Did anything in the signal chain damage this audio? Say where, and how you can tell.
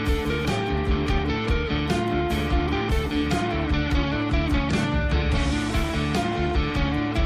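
No, nothing in the signal chain audibly damaged this audio.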